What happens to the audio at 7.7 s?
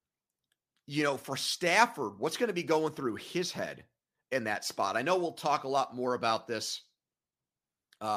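Nothing goes wrong at 7.7 s; the speech carries on intact through that moment, with no dropout, click or distortion.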